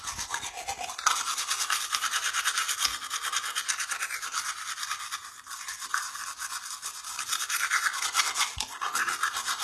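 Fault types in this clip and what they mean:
HE-AAC compression: the treble is likely rebuilt by copying lower bands upward, which fits about 16 kbps. Highs sound gritty and metallic, and nothing is left above 12.3 kHz.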